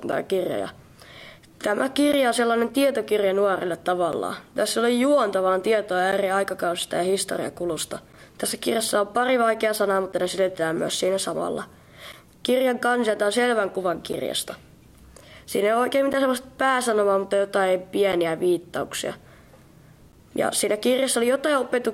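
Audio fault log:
0.12–20.13 s, periodic USB or driver dropouts: a brief gap recurs every 2.0 s, about ten in all, each losing roughly 10 ms of audio that is replaced by silence. The strict spacing points to a background task stalling the USB bus or audio driver on a fixed schedule, so samples never reach the output. Each sudden cut to zero and back makes a tick or pop, and it is audible only where signal is present.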